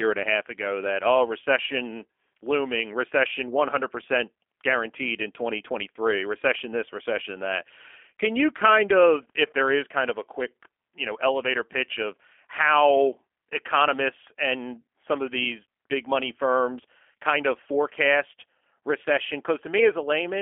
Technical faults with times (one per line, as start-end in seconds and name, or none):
0.00-20.41 G.729 codec